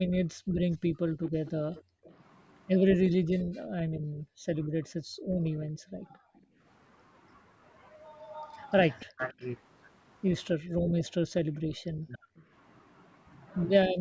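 A speech recording with two recurring faults. Speech suppressed in double talk cuts the talker down sharply, by around 40 dB at worst, across 0.0 to 6.61 s, 9.05 to 9.4 s, 10.55 to 12.51 s and the final moment from 13.89 s. Unlike a network dropout, the dips come only while the far side is talking, so an echo canceller likely turned down the talker along with the loudspeaker echo. An echo leak also returns a faint copy of the speech 288 ms late, at 0.72 to 2.13 s, 8.19 to 9.46 s and 11.57 to 12.45 s, fading from about 15 to 25 dB below the voice. That steady delay sets it apart from room reverberation, and it likely comes from a speakerphone's canceller letting residual loudspeaker sound through.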